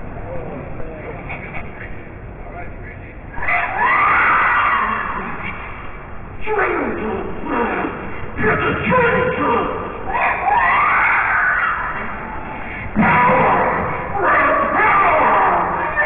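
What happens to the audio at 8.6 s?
Nothing goes wrong at 8.6 s; the audio plays through that moment intact, with no dropout, click or other fault.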